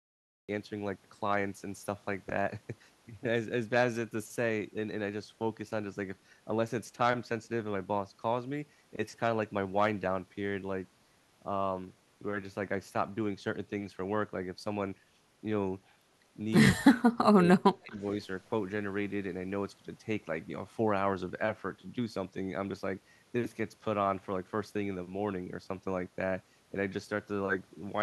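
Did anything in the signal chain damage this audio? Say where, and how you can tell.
Yes. The speech opens with digital silence, then sound bursts in mid-sound at 0.49 s with no attack: a cut-off start, where recording or storage began late.

Speech drops sharply from 16.73 to 17.65 s, by about 35 dB, and again from 17.83 to 18.04 s, by about 20 dB. This is likely speech suppressed in double talk, where the echo canceller in call processing ducked the talker.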